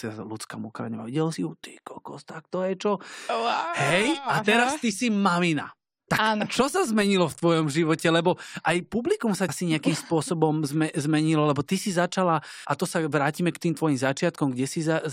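Right after "publikum sa", around 9.46 to 9.50 s, there's a short glitch from damaged data in the compressed stream, and again at 12.64 s after "lebo ty si začala", just before "a to sa vrátime". Corrupted bytes knock the decoder out of sync until it finds the next frame header.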